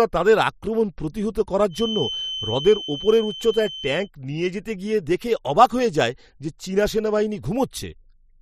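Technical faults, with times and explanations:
1.68–4.10 s, feedback whistle: after "তাদের আক্রমণ প্রতিহত", a thin, steady 3.1 kHz tone sits about 10 dB below the speech, likely a loudspeaker-to-microphone loop held just short of runaway.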